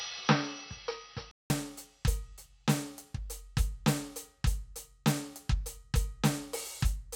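The input was likely switched to a poorer device for the opening of this music clip, from 0.0 to 1.5 s, so the recording begins through a narrower, lower-grade path before returning to the better one. During that stretch nothing reaches above 5.9 kHz, leaving the music dull and boxy, with a faint added noise sitting well below it. The level barely changes, and a gap of about 0.19 s marks the switch at 1.5 s.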